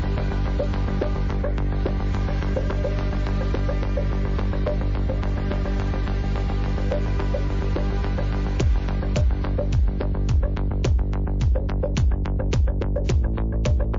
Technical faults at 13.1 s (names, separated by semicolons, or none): MP3 compression; pre-echo